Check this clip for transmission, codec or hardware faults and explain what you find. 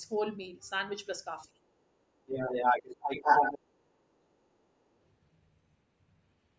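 Echo-canceller trouble is the story in this speech clip, with three related faults. The call's microphone path is band-limited, with nothing above 8 kHz.

Other side's voice leaking through shows up at 1.42, 1.65 to 1.86, 2.16 to 3.59, 3.76, 4.12 to 4.66 and 4.88 s. A second voice comes through, most likely loudspeaker echo the canceller didn't fully remove. Mostly it's faint scraps far below the talker, but from 2.16 to 3.59 s it's actually louder than them.

Background gated by the echo canceller hits between 1.48 and 1.59 s. The room tone dips by about 12 dB for roughly a tenth of a second, then comes back. That's the canceller clamping the mic while the far end played, then letting go.

Speech suppressed in double talk happens at 2.87 to 3.03 s, inside that loud leakage stretch. The talker's voice drops by around 20 dB. With both sides talking at once, the canceller likely couldn't tell its own talker from the echo and turned everything down.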